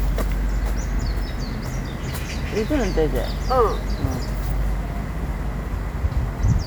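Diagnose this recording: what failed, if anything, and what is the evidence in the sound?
Nothing here points to a failure at any stage of the chain, so this recording of sounds needs no diagnosis and no fix.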